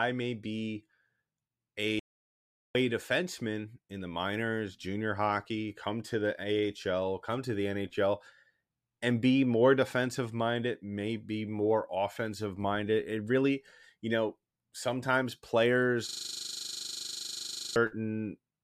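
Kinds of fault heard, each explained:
Audio dropout to silence: the input was likely lost briefly, so silence was written, leaving about 0.76 s of dead silence from 1.99 s with no room tone.
System hang loop: the system froze while the hardware kept replaying a 40 ms buffer, giving a 25 Hz buzz from 16.09 to 17.76 s.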